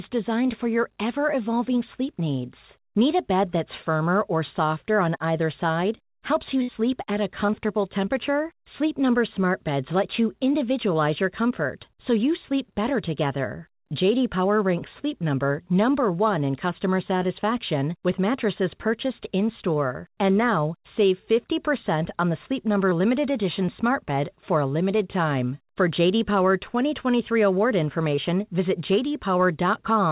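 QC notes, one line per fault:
6.62–6.70 s, burst of packet loss: right after "either side helps you" the speech gives way to a held, fading continuation of its last sound lasting about 60 ms, and it picks up again at "at a" with roughly 60 ms of real speech gone. Several packets in a row failed to arrive in time, so the receiver stretched the final sound it had and faded it down, then skipped forward when audio returned.
28.15–28.19 s, short concealed packet loss: a brief smear or wobble, over in a few hundredths of a second, where about 20 ms of the call never reached the decoder. The receiver covered the hole by extending the preceding sound, either from its pitch if voiced or as shaped noise if not, then crossfaded back into the real signal. The patch stays inside the call's narrow band, with nothing above 4 kHz, which fits G.711 A-law.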